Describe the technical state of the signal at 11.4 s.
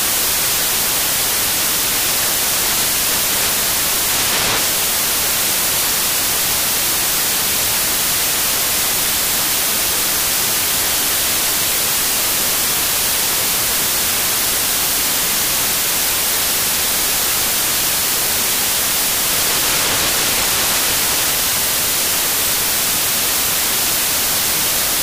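At 11.4 s you're hearing samples built from the wrong bytes, and it runs through the whole clip, not just that moment. The decoder assembles each sample's bytes incorrectly, so the jittery low bits end up dominating, giving loud, harsh broadband noise, close to white where the sound is loud.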